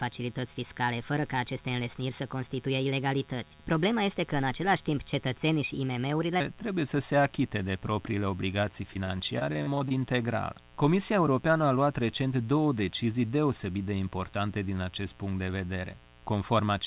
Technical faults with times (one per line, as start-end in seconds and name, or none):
0.00-16.86 mains buzz
0.00-6.40 section at the wrong speed
8.94-9.92 repeated packet loss (robotic sound)